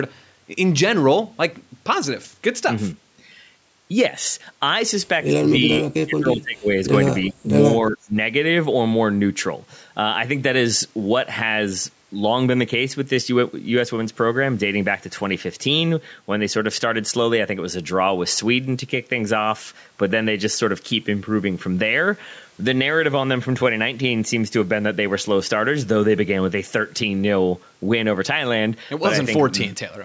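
From 5.91 to 6.71 s the speech dips by about 30 dB, likely speech suppressed in double talk, with the echo canceller turning the talker down while the far side spoke. At 7.29 to 7.34 s a brief echo leak surfaces. It is a faint copy of the voice delayed by 331 ms, about 35 dB below the speech, likely loudspeaker sound the canceller failed to remove. The same double-talk suppression returns at 7.33 to 7.52 s and again at 7.90 to 8.16 s, cutting the speech by about 30 dB and 20 dB respectively.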